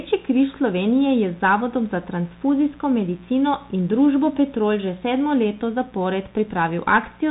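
From start to end, a mains buzz at 60 Hz sits roughly 30 dB under the speech: switching spikes on the supply add a raspy harmonic series. Throughout, the speech also carries Bluetooth CVSD headset codec damage, consistent with a 64 kbit/s link. Nothing passes above 3.8 kHz, sibilants turn scratchy, and granular hiss accompanies the speech.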